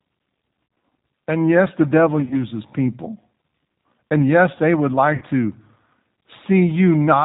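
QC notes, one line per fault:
Throughout: G.729 codec. Speech is band-limited to 4 kHz and sounds plainly rough and slightly synthetic. Each 10 ms stretch is rebuilt from a vocal tract filter, a pitch predictor and a few pulses, which fits an 8 kbit/s G.729A stream.
0.66–0.76 s, 2.21–2.37 s (after "yes the devil"), 5.16–5.24 s (after "yes they would"): VoIP packet loss concealed by the speech codec. About 70, 50 and 50 ms of audio is missing, in runs up to 50 ms. The decoder extends its last pitch and filter into a fading buzz or noise, leaving speech weak briefly afterward.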